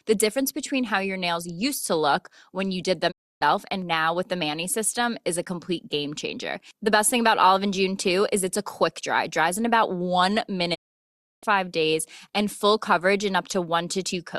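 At 3.10 s, after "look when you did", a digital broadcast dropout fades the speech out over about 20 ms to silence until "and now with the" at 3.43 s. The receiver muted on failed frames, and the audio sent meanwhile is lost. A longer one runs from 10.73 to 11.45 s, returning on "five days".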